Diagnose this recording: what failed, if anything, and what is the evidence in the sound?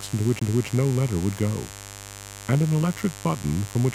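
Mains buzz runs throughout: a raspy 50 Hz buzz about 15 dB below the signal, from switching spikes leaking into the analogue wiring twice per mains cycle.

CD skip at 0.39 to 0.42 s: a brief mute of around 20 ms during playback, as the laser jumps to another turn of the disc's spiral and resumes elsewhere.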